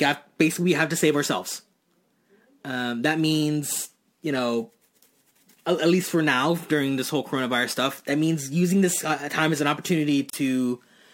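Right near the end, at about 10.30 s, the speech drops out for roughly 34 ms and comes back at 10.33 s. That's a gap at a join of encoded pieces: two separately encoded chunks were butted together untrimmed, so the encoder's start-up delay and last-frame padding both survive as silence. You hear a brief hole with softened edges, and then the speech picks up exactly where it left off.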